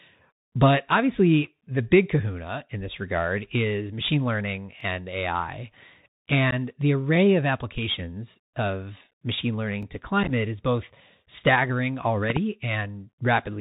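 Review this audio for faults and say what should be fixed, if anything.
The Bluetooth CVSD headset codec shapes the whole clip. The speech is cut off above 4 kHz. S sounds are scratchy, and loud high sounds distort where the one-bit step cannot keep up. A granular hiss sits underneath. This fits a 64 kbps CVSD link. To prevent it, record over a wideband link such as mSBC, or use a wired microphone.

Overlapping chunks cause a stutter at 4.81 s and again at 9.83 s. At each join, about 20 ms of sound plays twice. The spacing suggests 5-second processing chunks, each starting before the last one ended. To prevent it, fix the chunk bookkeeping so each new chunk starts exactly where the previous one stopped.

Unconcealed Bluetooth headset packet loss punches holes in the speech. There is a 15 ms gap at 6.51 s and an 11 ms gap at 9.11 s. A rough, crackly patch from 10.23 to 10.31 s loses about 34 ms in short runs. 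The edges are abrupt, and the level dips briefly afterwards. To prevent it, enable packet loss concealment and keep the headset close to the phone, away from interference.

A loud pop, actually two in quick succession, lands at 12.30 to 12.39 s. It peaks about 15 dB above the speech, which carries on underneath. A voltage step from static, a plug or a switch is the likely cause. To prevent it, secure connectors and avoid touching or switching hardware while recording.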